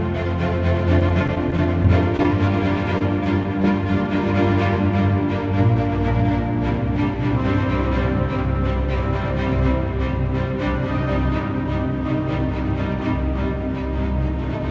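Repeated packet loss (robotic sound) runs from 0.999 to 2.47 s and again from 2.98 to 3.64 s. Audio arrived missing or late in many short bursts, each gap up to about 20 ms. Each hole was papered over by extending the preceding sound, leaving a choppy texture with fragments dropped. Everything sits below 8 kHz, consistent with the G.722 call path it travelled through.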